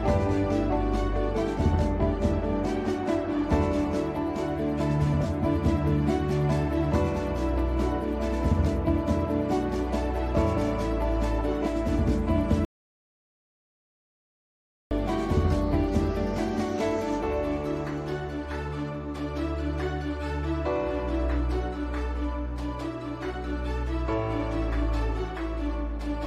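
From 12.65 to 14.91 s, likely a lost input link, an audio dropout to silence: the recording goes dead for 2.26 s, with no room tone.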